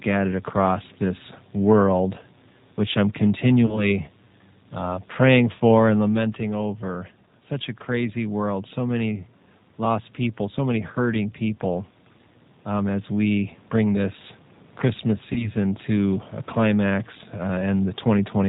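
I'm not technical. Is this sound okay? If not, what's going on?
No, there are a few problems.

G.729 codec, throughout: the voice went through a low-data phone codec built for internet calls. It rebuilds speech from a simplified model of the voice rather than sending the sound itself, and it drops everything above 4 kHz. That is why the speech sounds muffled, a little rough and slightly artificial from start to finish, although it stays understandable.

VoIP packet loss concealed by the speech codec, at 3.66 to 3.90 s (right after "this world which I'm") and at 15.33 to 15.50 s: each time, about 30 ms of the call never arrived. The decoder filled the gap by stretching out the last bit of voice it had, which gives a brief buzzy or noisy, smeared moment. It takes a fraction of a second to sound right again because each new piece is rebuilt from the damaged one before it.

Automatic gain rising, from about 4.8 s to 18.0 s: the system decided the input was too quiet and slowly turned the volume up. 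The voice and the room's background noise get noticeably louder together over those thirteen seconds. The change in level around 6 s, where the speaker seems to shift position, is separate from this and comes from the speaker moving, not from the system.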